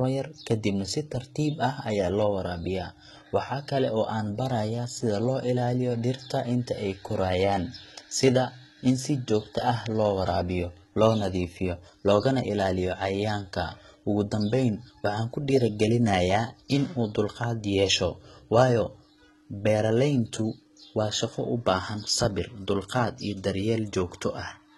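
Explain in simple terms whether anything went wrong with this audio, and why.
HE-AAC compression, throughout the speech: the treble sounds rebuilt, s sounds turn gritty and nothing remains above 11.8 kHz, likely from copying lower frequencies upward to save data.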